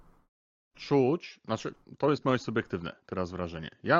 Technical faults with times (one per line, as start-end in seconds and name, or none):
none